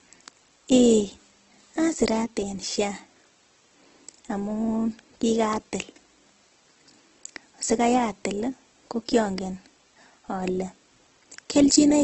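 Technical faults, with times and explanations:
Throughout: low-bitrate audio saved at a high bitrate. Nothing in the speech sounds above 8.2 kHz, and the low-bitrate artefacts remain despite the MP3 file's generous size. This is likely a very low-rate Opus encode around 12 kbit/s re-saved as 192 kbit/s MP3, which cannot restore what was discarded.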